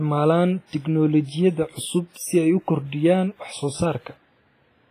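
Throughout the speech, heavy transform-codec damage is audible: a ringing, washy texture with hiss that swells and fades with the signal. Nothing is present above 15.3 kHz. This points to a low bitrate near 24 kbps, and the likely cause is WMA compression.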